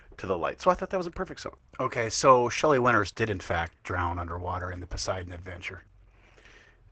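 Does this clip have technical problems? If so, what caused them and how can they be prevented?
Yes. Opus voice compression runs throughout. The speech is muffled, hoarse and faintly robotic, capped near 8 kHz with coarsely coded excitation, which fits SILK at around 12 kbps. Prevent it by encoding at a higher bitrate or keeping a lossless copy.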